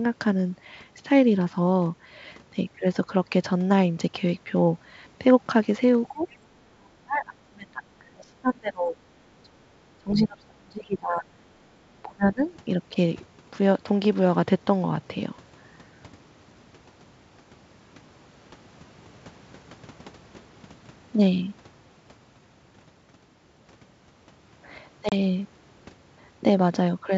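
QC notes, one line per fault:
6.08–6.25 s, 6.69–8.99 s, 9.43–9.80 s, 9.98–11.29 s and 12.02–12.43 s: speech suppressed in double talk. The talker dips by about 25 to 35 dB, longest near 2 s, likely because the canceller mistook overlapping far-end talk for echo.
11.57–11.64 s: background gated by the echo canceller. The room sound briefly dips by about 8 dB for roughly 70 ms and returns, a shallow duck rather than a hard hole.
25.09–25.17 s: packet loss on an ADPCM call. There is a sharp-edged 30 ms silence, which fits a few lost packets, and then the speech resumes slightly distorted as the decoder resynchronises.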